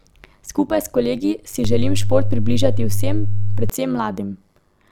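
A metallic buzz runs through the whole speech clip, with the level swinging by about 11 dB around a hundred times a second. This is overlap-add ripple: the audio was split into windowed frames and rejoined with overlaps that don't sum to a steady gain, so loudness pulses once per frame.

At 1.65 s a low thump appears while the speech carries on unaffected, and a second thump follows at 3.70 s. This is a DC step: the waveform's zero line jumps to an offset at 1.65 s, holds there, then steps back at 3.70 s.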